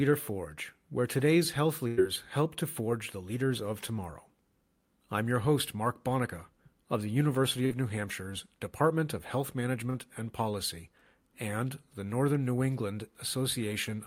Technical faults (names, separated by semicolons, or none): burst of packet loss; short concealed packet loss